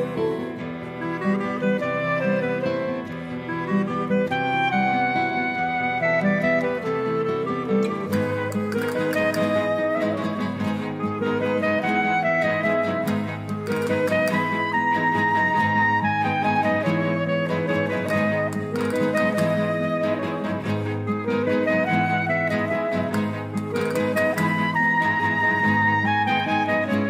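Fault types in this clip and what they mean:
No fault types are present in this clip, so there is nothing to describe.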